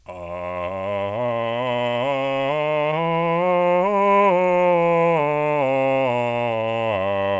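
The music carries no audible technical faults, arriving through a call codec path whose band ends at about 8 kHz, as a G.722 wideband link would give.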